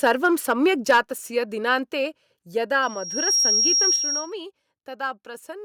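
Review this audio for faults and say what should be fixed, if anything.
Microphone overload from 0.05 to 0.53 s and 0.89 to 1.0 s gives the loudest peaks a harsh, crackly edge. The input was likely set so hot that the converter flattened the tops, pushing about 3 dB over, then about 6 dB with roughly a tenth of samples clipped.

Microphone volume stepped down at 0.91, 1.92 and 3.96 s. The whole sound drops by about 3, 4 and 6 dB, most likely the call software cutting input gain in jumps.

To prevent both, set the mic input lower from the start so peaks stay clear of the ceiling and the software never needs to step it down.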